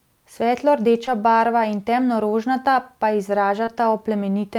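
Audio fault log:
1.05–1.09 s and 3.65–3.69 s, short concealed packet loss: in each spot about 20 ms of the speech never reached the decoder in time, and the receiver covered the gap with roughly 17–18 ms of guessed audio before blending back into the real signal. The patch either carries on the last sound's pitch or fills in with shaped noise, so you get a quick smear or wobble instead of a clean dropout, and a brief consonant there can get swallowed.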